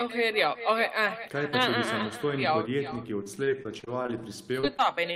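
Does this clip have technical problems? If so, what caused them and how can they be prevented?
Yes. Throughout the speech there is echo with no canceller. Every phrase returns as a fainter, thinner copy, about 12 dB below the original. It lags by a little under half a second. The far end is playing the call through a loudspeaker, and its microphone sends that sound straight back. Nothing strips it out before it crosses the network again. Enabling acoustic echo cancellation at the far end, or having that side use a headset, would prevent it.

From 3.23 to 4.10 s there is repeated packet loss, heard as robotic sound. Nine gaps land in under a second, the longest 30 ms. Together they cover about a fifth of that stretch. Each hole is patched by stretching the sound just before it, and then the next hole arrives. The patches pile up into choppy audio with fragments missing. A steadier network path and a larger jitter buffer would prevent this.

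Two short concealed packet losses follow, at 4.60 and 4.77 s. Each is about 20 ms of audio that arrived too late to decode. The receiver bridged each hole by continuing the preceding sound and then blending back in. The result is a brief smear or wobble. Reducing congestion on the link, or adding forward error correction, would prevent them.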